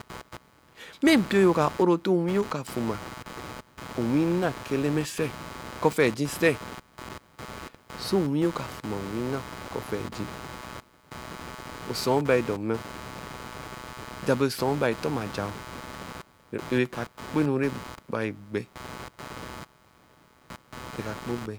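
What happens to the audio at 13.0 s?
At 13.0 s you're hearing computer activity noise, which runs through the whole clip. Processor or graphics load swings are shifting the audio circuit's shared ground, giving a buzzy, chirping rasp pulsing around 150 times a second, sitting roughly 15 dB under the speech.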